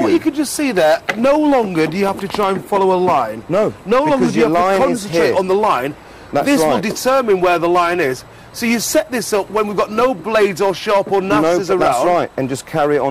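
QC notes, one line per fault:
throughout: hard clipping. The signal is driven about 8 dB past what the stage can pass, so the loudest peaks, a few percent of the waveform, are sliced flat. Those squared-off tops throw harmonics high into the spectrum, heard as a brittle crackle and fuzz riding each loud moment. Unlike soft saturation, which rounds peaks into a warmer, gradual thickening, this breaks up abruptly and harshly only once the overload threshold is crossed.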